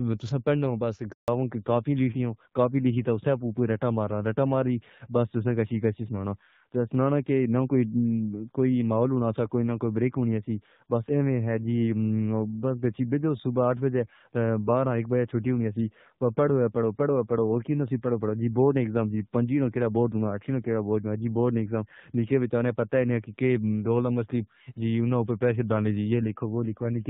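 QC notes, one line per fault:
1.12 to 1.28 s, handover gap: Right after "تو پند ہوں بس" the speech fades out within a few tens of milliseconds. Then there is dead silence for 160 ms. The call was passed from one network to another, and no speech frames got through during the switch, so whatever was said in that moment is simply gone. The sound resumes only when the new link comes up.
1.28 s to end, fallback to narrowband: From the handover onward, nothing above 4 kHz remains. The speech sounds duller, boxier and rougher. Before the gap, the clear wideband HD Voice sound suggests AMR-WB at around 12.65 kbit/s, with only light codec coloring. Afterward, the band limit and added grit fit a drop to the older AMR-NB codec, likely at 7.4 kbit/s. That codec cannot carry the upper band at all.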